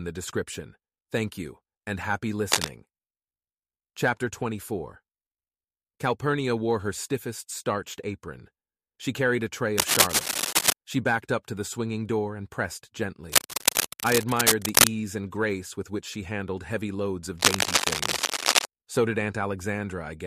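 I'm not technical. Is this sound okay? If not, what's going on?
No. Four bursts of cable scratch noise cover the speech: after "you and happy" (2.52 to 2.70 s), after "carried a tray" (9.78 to 10.73 s), at 13.30 to 14.88 s, and after "she handled heavy loads" (17.38 to 18.65 s). Each is a rough, louder-than-speech rustle, likely from a worn lead or plug being moved. Unlike single clicks or steady hiss, it comes and goes in uneven scratchy patches.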